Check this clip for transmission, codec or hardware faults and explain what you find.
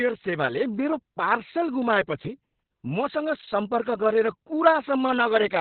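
The clip has one codec fault, present throughout: Opus voice compression running in its SILK linear-prediction mode at a narrowband setting. Nothing reaches above about 4.3 kHz, so the speech sounds muffled and telephone-like. The excitation is coded coarsely, which gives the speech a hoarse, slightly robotic edge. The damage is heavy, which fits a very low bitrate of about 6 kbps, possibly with long 60 ms frames.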